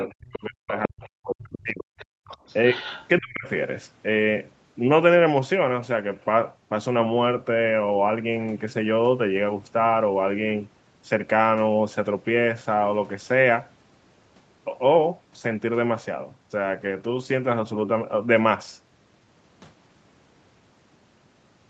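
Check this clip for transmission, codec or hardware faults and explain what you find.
Three echo-related faults occur in the first three and a half seconds of this speech. The audio carries nothing above 8 kHz, which matches the call path's bandwidth.

Other side's voice leaking through: a faint second voice appears at 0.0–0.07, 1.04–1.09, 1.41–1.58, 1.98–2.05 and 2.26–3.07 s. It sits well below the main talker, roughly 15 to 35 dB down. The likely cause is loudspeaker playback the echo canceller failed to remove.

Speech suppressed in double talk: the talker's level falls away from 0.07 to 1.91 s, dipping by around 40 dB. It falls again from 3.19 to 3.46 s, by around 30 dB. Both sides were likely talking at once, so the canceller turned everything down.

Background gated by the echo canceller: the room sound drops out from 2.19 to 2.26 s, about 35 dB down for 70 ms. The canceller clamped the microphone while the loudspeaker played, then released it.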